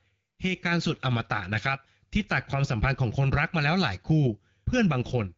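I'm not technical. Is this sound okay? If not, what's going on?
No, not quite. Near the end, from about 5.02 to 5.11 s, the speech turns briefly hoarse and gargly. That's AMR bit errors: a weak phone link scrambled a few small pieces of the coded voice.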